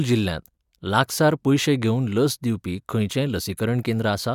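Speech, with no audible faults.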